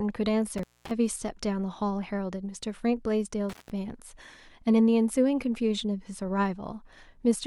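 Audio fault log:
0.58 to 0.91 s and 3.49 to 3.70 s, intermittent contact: the speech drops out twice, for about 0.22 s in the first event and about 0.17 s in the second, with a crackle as the signal breaks and again as it returns. A loose plug or cable connection is momentarily parting and then remaking contact, so the signal path goes open and only faint hiss remains until the conductors touch again and the speech resumes.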